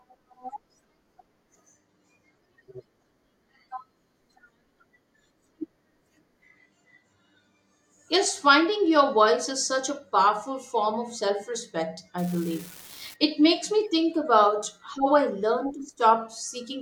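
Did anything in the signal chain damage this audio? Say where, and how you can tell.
Yes. From 12.18 to 13.14 s an even crackle sits over the speech and continues through the pauses. This is an unreliable data bit at the converter's digital interface: one marginal data line flips at random, and each error adds a fixed spike of about -27 dBFS.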